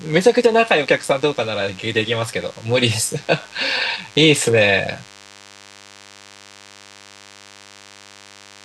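A thin, steady buzz at 100 Hz with many harmonics runs under the speech from start to end, well below the voice. This is DECT cordless phone buzz: a nearby handset or base station bursts every 10 ms, and the audio circuit rectifies those bursts.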